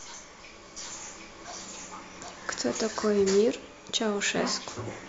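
A doubled audio track runs from 0.77 s to 3.05 s: the speech is heard twice, with a second full-band copy trailing the original by roughly seven tenths of a second at about the same loudness. The copy has no decay or room colour and cuts in and out abruptly at those times. The likely cause is the same signal being captured again through a slower path, or an edit leaving two copies out of step.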